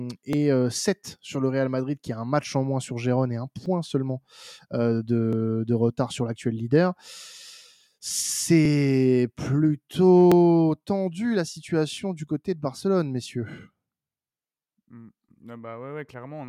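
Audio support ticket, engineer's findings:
Clock drift buffer slips: regular click every 1.66 s from 0.33 s to 15.29 s, about ten in all, over speech. Likely cause is two unsynced device clocks several hundred ppm apart, so short sample blocks get dropped or repeated. Spectrogram shows evenly spaced thin vertical broadband lines; waveform shows step discontinuities.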